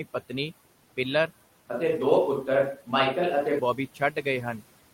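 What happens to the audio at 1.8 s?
At 1.8 s the sound has suddenly gone roomy and hollow. From 1.53 s to 3.59 s the clip has what sounds like a switch to a distant microphone, likely because the close microphone's signal dropped out and a farther one filled in. The low end thins out and reverberant tails hang after each syllable, though the level barely changes. On a spectrogram the bass band fades and energy smears past word endings. On the waveform the gaps between syllables fill in with decay.

Noise suppressor artifacts run through the whole clip and are present here too. The suppressor pulls steady noise down by about 17 dB wherever it judges a band to be noise, frame by frame. So the background drops away in pauses and swells back under the voice. On a spectrogram this shows as a patchy, flickering noise floor, dark in the gaps and speckled with isolated bright cells.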